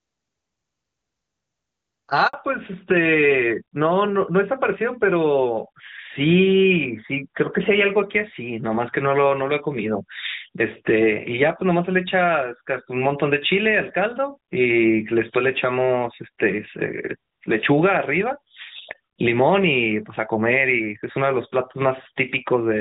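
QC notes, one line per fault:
2.27–2.33 s, handover gap: the sound drops out for about 60 ms as the call hops between networks. Nothing gets through during the switch, so the signal cuts to silence and whatever was said in that slice is simply gone.
2.33 s to the end, fallback to narrowband: right after the gap the call slips from HD Voice, which had sounded like a top-rate AMR-WB link, down to what sounds like AMR-NB at about 12.2 kbit/s. Nothing above 4 kHz survives, so the sound turns duller and rougher for the rest of the clip.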